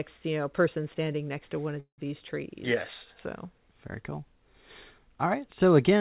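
At 1.8 s a call audio freeze interrupts the speech until about 2.0 s, most likely because packets stalled in transit and the jitter buffer ran dry. With nothing new to play, the receiver stretched the last sound into a fading buzz that drops into silence for roughly the final 0.1 s. When packets resume, the speech picks up where it stopped, so nothing is lost, but everything after is pushed about 0.18 s later. Throughout, the audio stops at 4 kHz, which fits narrowband G.711-style call coding.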